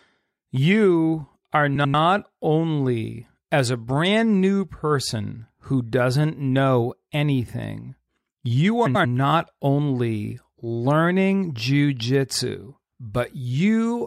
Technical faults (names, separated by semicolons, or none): frames out of order